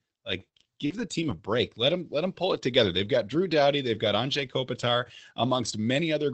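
Speech clip with repeated packet loss (robotic sound) between 0.39 and 1.34 s. Three short holes, the longest about 43 ms, are patched by stretching the preceding sound, so around 0.2 s comes out choppy, with roughly 80 ms of speech simply gone. The audio has passed through a call codec path, and its top end stops near 8 kHz.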